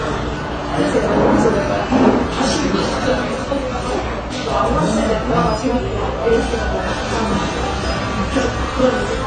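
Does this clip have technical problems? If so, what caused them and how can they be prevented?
Yes. AAC compression damage runs throughout: nothing is heard above 9 kHz, and the sound is dull and smeared with a warbling, fizzy texture. Likely AAC-LC encoding at a low bitrate, which fits about 24 kbps. It lowered the cut-off and starved bands of detail. Encode at a higher bitrate, or keep a lossless copy, to prevent this.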